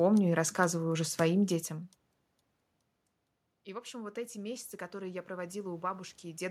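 Automatic gain rising runs from 3.5 to 6.46 s, lifting voice and room noise together by about 8 dB, regaining only part of the about 19 dB drop after the talker moved away near 1.5 s.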